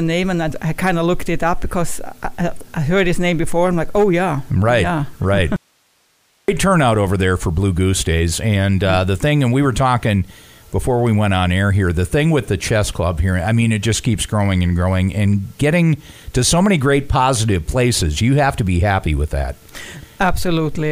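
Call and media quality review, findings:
Abrupt cut to faint hiss, 5.56 to 6.48 s, about 45 dB down. Audio dropout to a faint residue, likely upstream signal loss with the later path still live.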